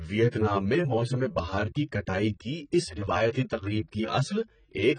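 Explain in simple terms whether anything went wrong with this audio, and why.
Yes, two things went wrong. Throughout the speech, the sound is dull and smeared, with nothing above 9 kHz, likely from heavy AAC compression discarding detail to shrink the file.

From 0.13 s to 4.97 s there are regular ticks, roughly every 0.15 s, about 40 in all. These are clock slip clicks, likely caused by two devices running on unsynchronised clocks, so single samples get dropped or repeated.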